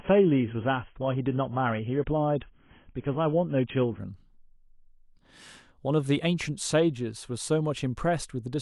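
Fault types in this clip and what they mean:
Adaptive stream starting at a low bitrate: speech opens dull, with nothing above 3.7 kHz, which fits a low-bitrate AAC version, then sharpens abruptly, without a gap, at 4.0 s.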